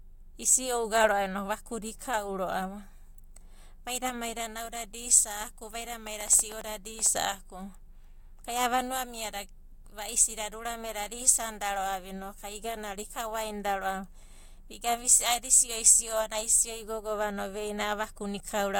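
A train of clicks runs from 6.07 to 7.07 s, just after "maida nauda da isa'aku". About ten near-identical pulses arrive at an uneven pace of roughly eight per second. They stand a few decibels above the speech as sharp ticks, likely from electrical interference or a faulty connection.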